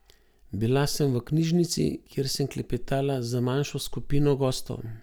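No technical faults can be heard anywhere in the speech recording. At no point does anything break into the sound to signal a failure along the audio path.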